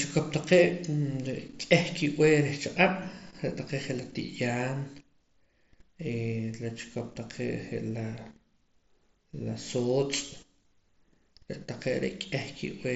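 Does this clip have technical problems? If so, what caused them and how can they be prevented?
Yes. At 10.69 s, concealed Bluetooth headset packet loss: a couple of frames failed between headset and phone, so the receiver patched about 15 ms with recently repeated waveform, leaving a glitch in the mSBC-coded speech. Keeping the headset close to the phone, with few obstacles and little 2.4 GHz interference nearby, prevents these dropouts.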